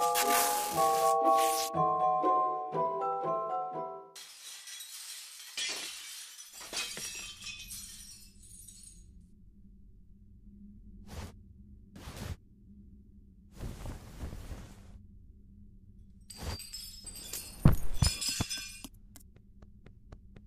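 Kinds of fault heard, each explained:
No technical faults can be heard anywhere in the audio. There is nothing here that calls for a line of its own.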